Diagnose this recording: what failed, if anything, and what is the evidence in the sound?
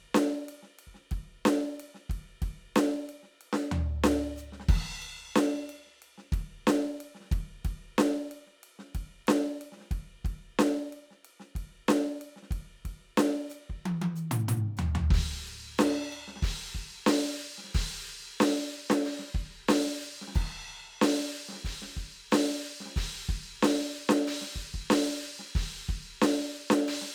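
Nothing failed in this music recording, and there is no evidence of a fault in the sound.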